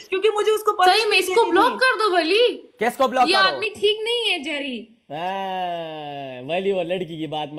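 From 3.65 s to the end, the sound turns hollow and phasey, as if heard through a tube, with a dull, thinned-out upper midrange that stays fixed rather than sweeping. This is channel delay (comb filtering). One channel runs late by a fraction of a millisecond, and when the two are summed to mono, the shared content cancels at evenly spaced frequencies. The first deep notch falls around 1.5 kHz, with further notches repeating above it.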